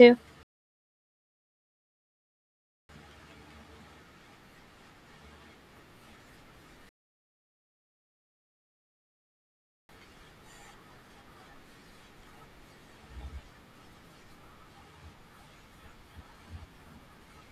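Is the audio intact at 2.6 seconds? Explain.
No. At 2.6 s a rebuffering stall (0.43–2.89 s) adds about 2.46 s of silence while the player waits for data, a flat waveform and blank spectrogram before speech resumes unchanged.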